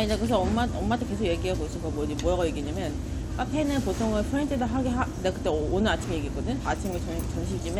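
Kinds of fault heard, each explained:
No technical faults are audible anywhere in the recording.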